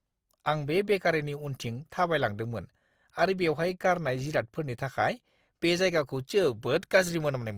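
Opus compression runs through the whole of this speech clip, from start to finish. The sound stays fullband, with no narrowing of the top end, but tonal parts of the speech come across rough and grainy, with a noisy texture where clean harmonics should be. That fits Opus in its music-oriented CELT mode at around 24 kbps. The encoder keeps each band's energy but, short of bits, fills band detail with folded or noise-like content instead of leaving gaps, which is the likely cause.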